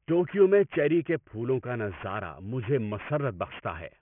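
Aliasing runs through the whole clip. Everything tops out hard at about 3 kHz, which suggests the audio was resampled down to around 6 kHz with no low-pass filter first. Whatever energy sat above that fold point got mirrored back down into the band as false, unrelated frequencies, sitting roughly 20 dB under the speech. You hear it most on the sibilants, which come out gritty and a bit metallic instead of airy.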